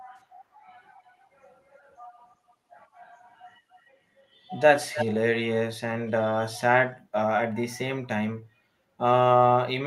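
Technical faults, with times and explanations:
0.99–1.27, 2.30–2.53, 3.28–3.39, 3.71–3.80 and 4.83–5.07 s, echo leak: a copy of the speech returns 305 ms late, faint at about 35 to 40 dB down but about 5 dB down at 4.83 s, likely from a loudspeaker echo canceller letting residue through. A spectrogram shows a shifted ghost of the speech bands.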